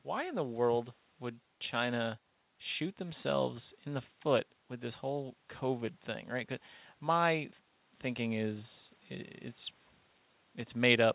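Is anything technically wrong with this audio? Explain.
No, nothing is technically wrong with this speech audio; it has passed through a G.711 mu-law call path, which leaves nothing above 4 kHz.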